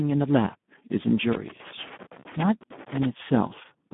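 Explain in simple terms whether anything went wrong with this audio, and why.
Two things went wrong. The whole clip went through the Speex codec at a low setting, so the speech sounds hoarse, buzzy and a bit robotic, with nothing above about 3.8 kHz. Then, from 1.33 to 3.05 s, there's loose connector crackle: a bad contact kept cutting in and out, chopping the signal into scratchy bursts.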